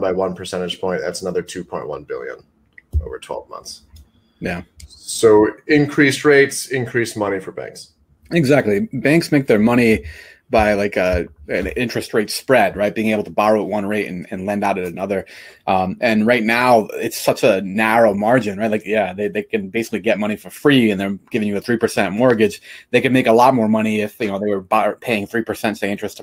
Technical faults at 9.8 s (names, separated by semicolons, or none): none